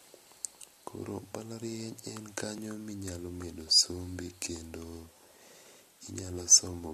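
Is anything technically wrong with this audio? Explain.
Yes, there is one fault. At 2.58 s, just before "minyalo medo sombi kendo", an overlap between stream segments occurs. Two segments (4 s long) claim the same time span, and the player trims the shared stretch. About 7 ms of speech is discarded, so the waveform jumps and produces a brief click or skip.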